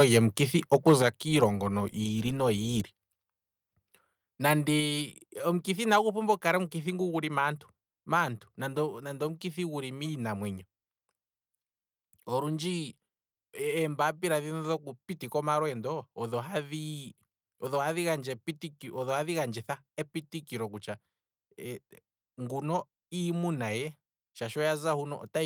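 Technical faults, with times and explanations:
0.00–0.18 s and 0.73–1.07 s, microphone overload: The loudest moments at the very start and again around the one-second mark have a harsh, crackly edge, as though the peaks are being shaved flat. That's most likely the mic input set too hot, so the signal runs about 4 dB past the converter's ceiling and the tops of the waveform get chopped off. Only a small fraction of samples, around 2 percent, actually hit the limit.
1.02 s and 4.8 s, microphone volume stepped down: Near the end of the second overloaded stretch, the whole level drops suddenly by about 6 dB, voice and background together, and then at 4.8 s it steps down again by about 3 dB. It sounds like the call software spotted the clipping and pulled the device's input gain down in single jumps rather than gradually. That explains why it's an abrupt step rather than a smooth fade.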